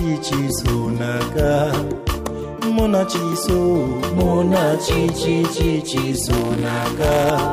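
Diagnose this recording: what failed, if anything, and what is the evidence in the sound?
A robotic 172 Hz buzz from 6.33 to 7.30 s is buffer tearing at the driver or buffer stage: each period splices in a sliver of audio from about 20 ms earlier, and the 172 Hz rate fits a 256-sample buffer.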